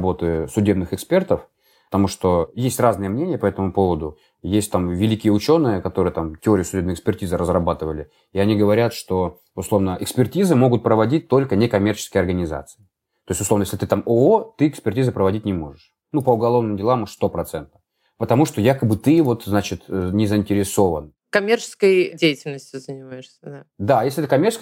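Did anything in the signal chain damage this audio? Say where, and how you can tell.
No, nothing in this speech recording stood out on listening as damage from any stage of the signal chain.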